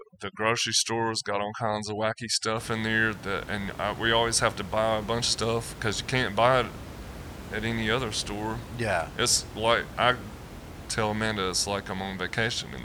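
Right from the start until about 2.57 s, just before "in there that and", there's overdone noise removal. The denoiser is pushed way too hard, slamming individual frequency bands down whenever they sit close to its noise estimate, and it takes the quieter bits of the speech along with them. So the background drops and breaks up into little twinkling specks. After that the room noise sits about 14 dB under the speech.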